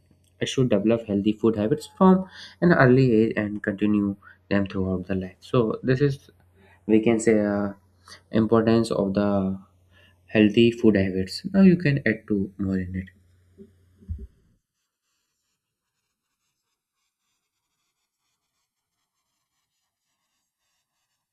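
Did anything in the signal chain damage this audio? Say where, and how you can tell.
Yes. Across the whole speech clip there is a slow, swirling flanging that sweeps steadily from start to end, which is the sign of channels drifting apart at the converter stage. The two channels were captured on devices with separate clocks, off from each other by something like 70 parts per million, so the delay between them grows gradually, reaching roughly a millisecond by the end. Summed to mono, the resulting comb notches glide through the spectrum.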